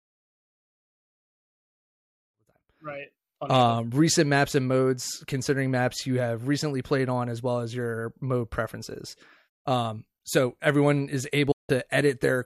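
A digital broadcast dropout runs from 11.51 to 11.70 s, just after "so everyone is". The receiver stopped getting valid frames and muted. The speech fades out within 8 ms and 168 ms of programme is lost, which points to several failed frames.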